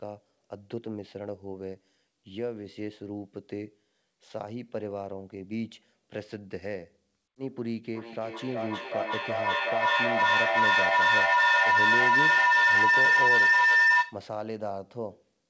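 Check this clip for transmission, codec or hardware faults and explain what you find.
One fault, a feedback howl, runs from 7.95 to 14.3 s. A microphone and loudspeaker sharing a room closed a loop whose gain exceeded unity, so each pass grew louder. The tone settles near 2 kHz, pulses roughly every 0.4 s, and peaks about 12 dB above the speech. The band limit at 8 kHz suggests a wideband call codec such as G.722.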